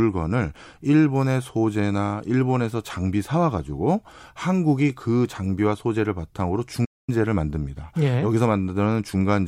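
Speech with a playback stall from 6.84 to 7.09 s: the sound halts for about 230 ms, likely because the player ran short of data.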